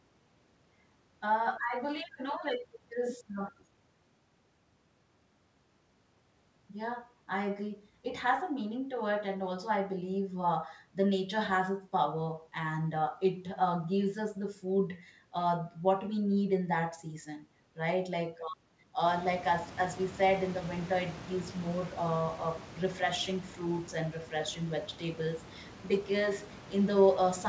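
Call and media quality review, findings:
No faults found in call audio.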